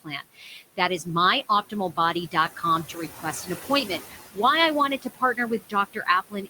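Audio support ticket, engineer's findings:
Noise suppressor artifacts, whole clip. Room noise, sitting about 15 dB under speech, is pulled down about 15 dB in pauses and surges back under syllables. The frame-by-frame band gains act on noise, unlike clipped speech.

Speech cut by the noise suppressor, 0.04–1.06 s (up to about 15 dB, a few hundred ms in total), 2.31–3.66 s (about 11 dB), 4.01–4.38 s just before "I wanted" (about 12 dB), 5.02–6.50 s after "I wanted" (about 17 dB). Soft speech was misjudged as noise and attenuated, so it sounds swallowed rather than muted outright.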